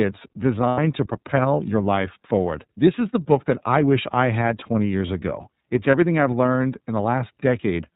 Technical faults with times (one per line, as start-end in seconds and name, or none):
0.00-7.96 iLBC codec
0.69-0.79 lost iLBC frames
5.91-5.94 lost iLBC frames